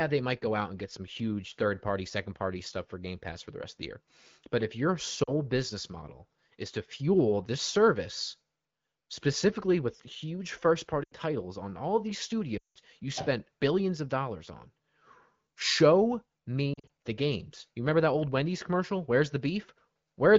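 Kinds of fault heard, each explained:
Lost AMR speech frames: damaged frames get dropped and the wideband decoder repeats its last good pitch and vocal tract settings while fading the gain, giving brief dips and warbles near 5.2 and 16.7 s, and at 11.0 s an 80 ms gap and at 12.57 s a 180 ms gap that drop to near silence.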